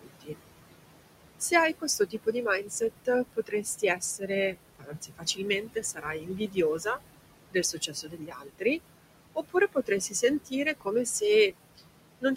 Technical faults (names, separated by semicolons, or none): noise suppressor artifacts; speech cut by the noise suppressor